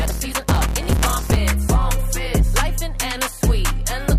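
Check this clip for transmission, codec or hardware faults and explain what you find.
One fault is present, confined to the opening of the clip. From 0 to 1.37 s there is a block size mismatch (truncated): blocks are cut short, producing a 150 Hz buzz and audio running 1.6 times fast at near-normal pitch, which fits 512-sample blocks read as about 320.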